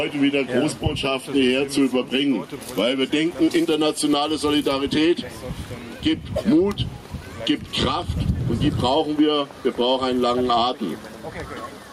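Gain pumping throughout: ducking around 10 dB under loud sounds, likely fast limiting on excessive gain; unlike a gate, never silent.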